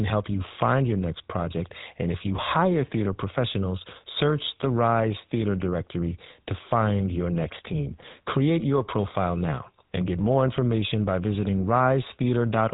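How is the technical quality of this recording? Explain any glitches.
The quality is poor: the whole clip has passed through the GSM full-rate codec, and the damage is plainly audible. From start to finish, the codec rebuilds the speech from a vocal-tract model driven by a sparse, regularly spaced pulse train that keeps only a third of the excitation detail, consistent with a 13 kbps rate. Nothing passes above 3.8 kHz, so the speech sounds narrow and dull, with a buzzy, gravelly roughness.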